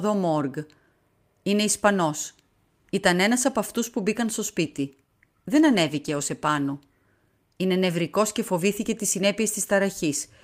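From 4.64 s to 8.69 s there is a call bitrate drop. The sound turns coarse, with the top end thinning, consistent with the encoder falling from around 64 kbps to about 24 kbps after the bandwidth estimate fell. It is at its roughest for about 2 s before recovering. Unlike packet loss, there are no gaps, clicks or repeated fragments. The quality degrades and then recovers.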